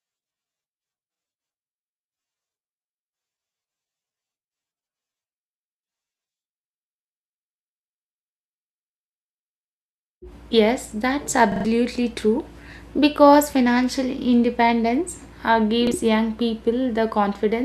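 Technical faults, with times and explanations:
1.15–1.20 s, repeated buffer: audio arrived late, so the device replayed its last 43 ms block once, which fits a 2048-sample buffer. This gives a brief hard-edged stutter and drops about 40 ms of speech.
11.52–11.65 s, repeated buffer: a longer stall made the same 43 ms block play three extra times. This gives a rapid stutter with abrupt joins and drops roughly 150 ms of speech.
15.87–15.92 s, repeated buffer: just after "financial independence uh", late data caused one extra play of the 43 ms block. This gives a short doubled fragment and drops about 40 ms.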